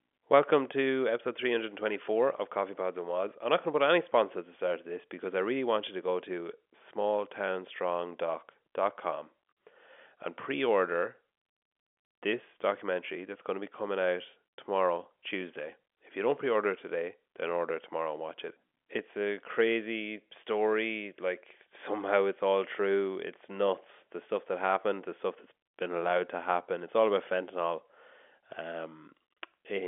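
Speech over a G.711 mu-law telephone path, band-limited to roughly 250 Hz to 3.4 kHz with nothing above 3.7 kHz, and no faults to report.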